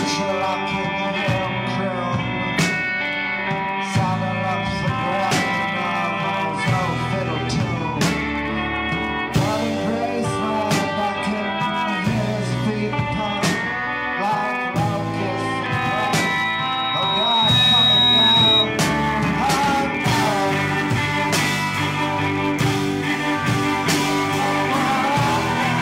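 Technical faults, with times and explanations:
15.77–18.70 s, loudspeaker feedback squeal: a 3.8 kHz tone swells over about two seconds until it rises above the sound, because the microphone-to-speaker loop's gain exceeds one at that frequency.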